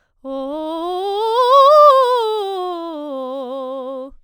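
Throughout the music, the sample rate appears to have been raised by simple linear interpolation, which fits a conversion from 22 kHz to 44.1 kHz, and this produces imaging from linear upsampling. Joining samples with straight lines filters poorly, so the top of the original band is dulled. A faint mirrored copy of the spectrum also remains between 11.03 and 22.05 kHz, roughly 40 dB below the signal, heard as a light metallic shimmer on bright, high material.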